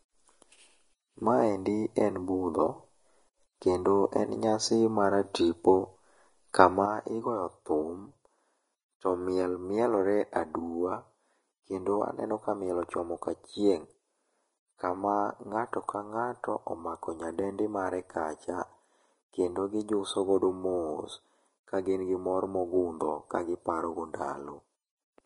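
From the start, the speech carries the marks of Vorbis compression, likely from encoding at low quality. Nothing is heard above about 10.6 kHz. The treble that remains sounds hissy and grainy. The encoder keeps a smooth outline of the spectrum but quantises the detail on top of it very coarsely. That detail turns into noise of similar energy. Voiced sounds take on a rough edge, and consonant onsets are smeared. The damage is plain, and fits a bitrate near 29 kbps.

At 6.86 s a sudden gain jump occurs. The level drops by about 6 dB in a single step, with no fade. It stays lower until the end of the clip. The speech and the background noise fall together, so the change sits in the signal path rather than in the sound itself. This is likely a digital gain setting applied instantly instead of being ramped.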